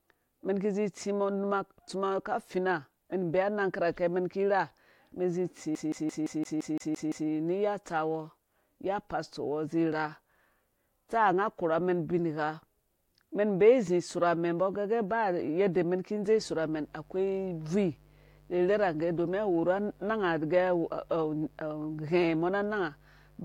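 At 5.75 s the speech catches on a CD stuck on one turn. A flaw on the disc throws the laser back at the same point on each rotation. The same slice, about 0.17 s long, plays nine times in a row. A brief mute marks every jump back. The result is a fast, even stutter that runs until 7.29 s. Then playback moves on.

From 16.38 s to the end, a mains buzz sits under the speech. Sharp switching spikes from the 50 Hz supply leak into the signal twice per cycle. Their harmonics climb well up into the kilohertz range. That gives a steady, raspy drone rather than a smooth hum. It stays at a constant level, roughly 30 dB below the speech.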